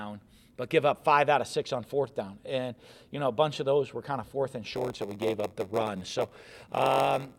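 Block size mismatch (padded) from 4.73 s to the end: short blocks are zero-filled to fit 512-sample reads, giving a 93.8 Hz buzz and playback slowed to 0.938 speed at near-normal pitch.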